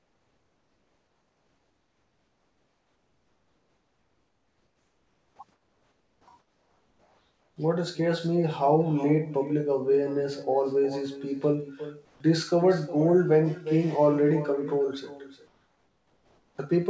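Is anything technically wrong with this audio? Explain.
Yes, there are three problems, on top of a call path that stops at 8 kHz, which points to a wideband call codec such as G.722.

The first issue is echo with no canceller, running the whole way through. Every phrase comes back roughly four tenths of a second later, about 14 dB down, as a thinner shadow. What's happening is that the far end is playing the call on a loudspeaker, their mic is picking it up, and nothing is subtracting it before it's sent back, so the speech returns after the network round trip.

Next, the background seems to be comfort noise in place of the real thing, at 0.0 to 5.39 s, 5.52 to 6.27 s, 6.39 to 7.56 s, 12.05 to 12.20 s and 15.47 to 16.58 s. In those gaps the room tone turns into a flat, featureless hiss about 4 to 7 dB quieter than the actual background. The likely cause is discontinuous transmission: the sender stops sending during silence and the receiver fills the gap with synthetic noise of roughly the right shape.

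Finally, there's an onset clipped by the voice detector right at the end of that second gap, around 6.21 to 6.27 s. The sound comes in abruptly, missing about 60 ms of its soft start. The likely cause is that the sender's voice detector was slow to notice speech resuming, so those first moments were never sent and comfort noise played in their place.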